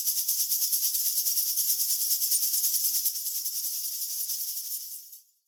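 From 3.09 s to the end, one channel drops out, likely a lost stereo side before mono summing, so the sound abruptly falls by about 6 dB.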